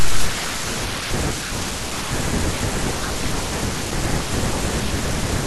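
Speech throughout, with no technical fault audible anywhere in the clip.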